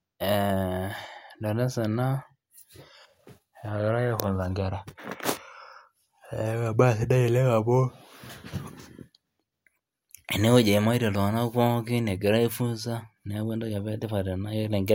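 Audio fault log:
No fault found in this speech clip.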